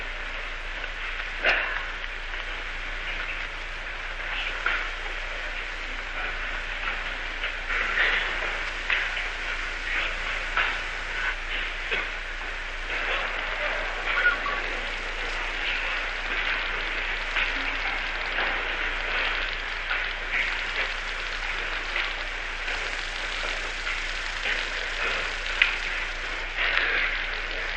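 No technical faults occur at any point in this sound, so there is nothing to describe in time order.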